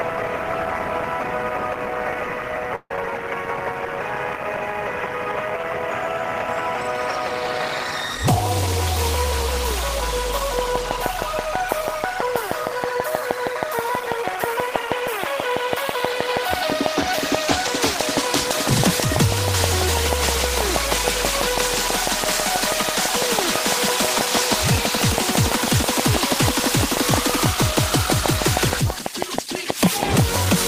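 At 2.75 s a long network dropout begins, likely from lost packets: the last sound stretches into a fading buzz, briefly goes silent, and resumes at 2.98 s with about 80 ms missing. From 10.59 s to the end, a train of clicks ticks at a regular 6.15 per second, well above the sound, likely from electrical interference or a struggling interface.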